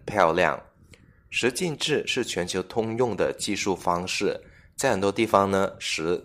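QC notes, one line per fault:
0.19–0.46 s, hard clipping: the speech overdrove a stage by about 2 dB, flattening its peaks and adding high harmonics heard as brief crackle on loud moments.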